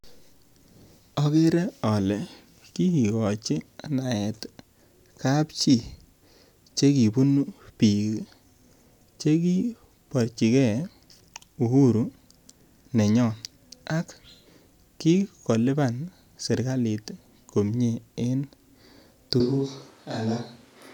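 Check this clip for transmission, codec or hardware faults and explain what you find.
One fault is audible, near the very end of the speech. At 19.40 s the sound abruptly turns roomy and hollow, with thinner bass, and stays that way to the end. This is a switch to a distant microphone. The likely cause is that the close microphone's feed dropped out and a pickup further away took over, capturing more room reflection. Loudness stays about the same, and background noise sits roughly 35 dB below the speech. On a spectrogram the low frequencies thin out and reverberant smearing blurs each syllable's edges; the waveform shows no level step, only softer, less defined attacks.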